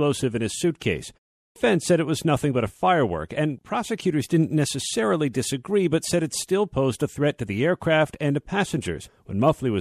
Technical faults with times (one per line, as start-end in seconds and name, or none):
1.40-1.56 clipped start after a pause